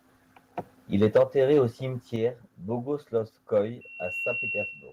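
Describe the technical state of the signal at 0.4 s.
At 0.4 s the speech signal is intact, with no audible fault of any kind at that point.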